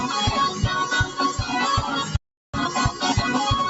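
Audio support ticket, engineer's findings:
Noise suppressor applied to music or sounds, whole clip: held tones and tails dip by a few dB while attacks pass, giving pumping and thinning. Unlike plain compression, the gain drops on sustained energy, not peaks. Speech-tuned suppressor left enabled.

Playback stall, 2.16 to 2.54 s: output goes fully silent for about 0.38 s mid-flow, then resumes. A hard gap rather than masked loss or a suppressor dip. Likely player buffer underrun or blocked audio thread.

Time-compressed catch-up, 2.54 s to end: audio runs about 1.15x fast at unchanged pitch. The player is splicing out and cross-fading short segments to drain backlog after the stall. Distinct from resampling, which would raise pitch. Band-limited to 8 kHz by the call path.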